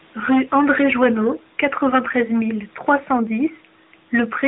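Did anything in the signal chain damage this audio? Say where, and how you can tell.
Yes. The AMR narrowband mobile codec stage damaged the speech throughout the whole clip. Nothing above 4 kHz is present, which points to 8 kHz sampling, and the voice has a plainly audible buzzy, synthetic quality. That comes from the codec rebuilding speech from a vocal-tract model driven by a few pulses in each 5 ms subframe of every 20 ms frame. The degree of damage fits an AMR-NB mode of about 10.2 kbit/s.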